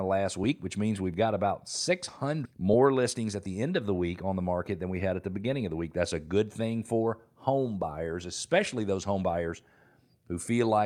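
At 2.45 to 2.47 s the speech takes a skip ahead. Roughly 0.7 s of audio never plays. It was dropped in transit, or thrown out by an overfull jitter buffer while later audio sat waiting. Nothing fills the gap. The two sides are butted together almost directly. The listener hears an abrupt jump forward, with part of the speech simply missing. Delay drops by about the same amount.

From 3.15 to 3.63 s there is a jitter buffer speed-up. The buffer still held more audio than its target. To trim the delay, the receiver cut many short slices, each a pitch period or a few long. About 70 ms goes in total. Playback runs at 111 percent speed. Pitch stays the same. The speech sounds rushed for that half second.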